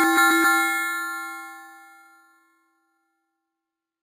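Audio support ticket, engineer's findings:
Bright metallic fizz riding on the sound for the whole clip, level tracking the source, about 13 dB below it. Imaging from sample-and-hold upsampling: samples repeated without a smoothing filter. Lowest mirror copy sits around 5.5 to 11 kHz, which fits an 11 kHz source raised to 44.1 kHz.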